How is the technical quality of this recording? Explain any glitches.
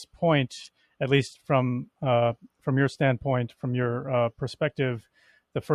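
There's one real glitch, right near the end. From 5.02 to 5.39 s the sound gets cut by the noise suppressor. It mistakes that stretch for noise and turns it down, by about 17 dB at its deepest, so for roughly a third of a second the tail sinks in level.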